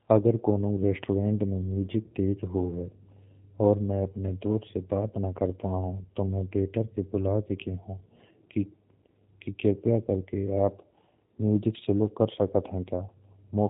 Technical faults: G.729 codec

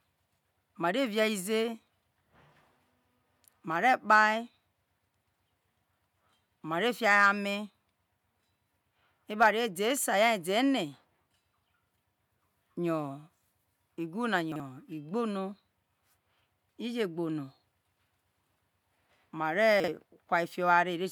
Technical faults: chunks out of order

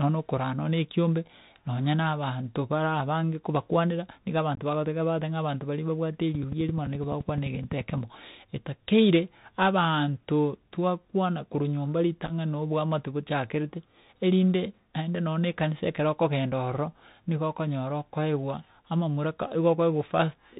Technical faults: Bluetooth CVSD headset codec; unconcealed Bluetooth headset packet loss; train of clicks

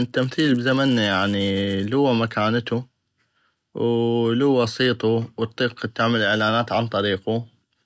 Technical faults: resampler restarted on every block

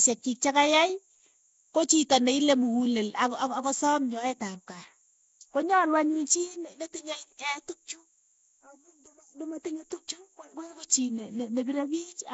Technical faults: Nellymoser compression

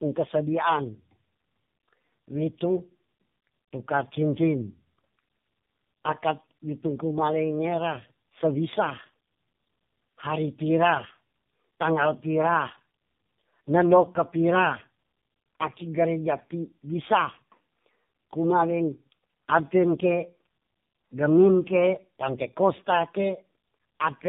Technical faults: tandem speech coding

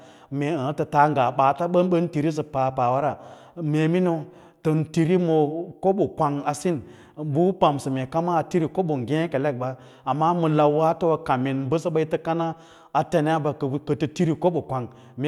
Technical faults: none

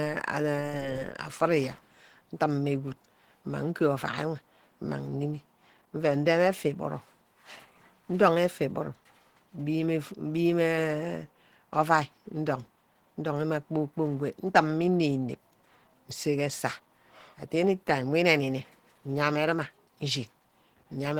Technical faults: Opus compression

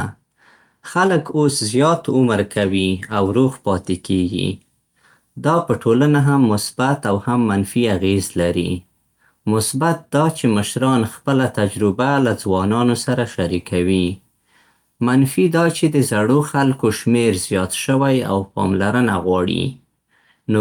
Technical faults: none

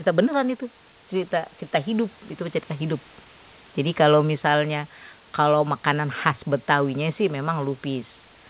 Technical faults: none

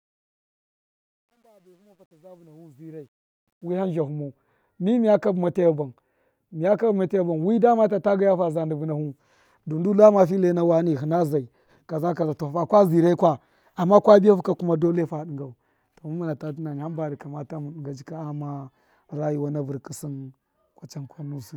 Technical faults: truncation distortion on a fade

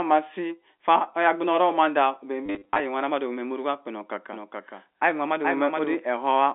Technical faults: packet loss with last packet repeated; doubled audio track

